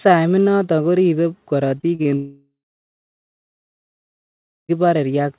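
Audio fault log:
1.78–2.07 s, repeated packet loss (robotic sound): Right after "inatan koribe", four short holes, the longest about 38 ms, break up the audio, and about 100 ms goes missing in all. Each hole is patched by repeating the last fragment, so about 30% of this stretch is stand-in sound, heard as choppy. On a spectrogram, already capped at 4 kHz by the G.711 call path, the patches show as smeared, repeated bands with abrupt seams. The waveform shows small stutters.
2.17–4.71 s, long network dropout: About 2.5 s of audio never arrives, likely because the network stopped delivering packets. The receiver first extends the last sound as a fading buzz for roughly a third of a second, and then leaves about 2.15 s of silence. The audio resumes further on, with that stretch simply gone. The waveform goes flat after a short decaying tail. On a spectrogram the band-limited texture dissolves into a blank gap.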